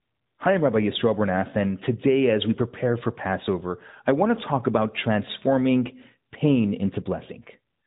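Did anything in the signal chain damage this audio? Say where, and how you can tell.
No, nothing in the signal chain stood out as damaging this speech on listening.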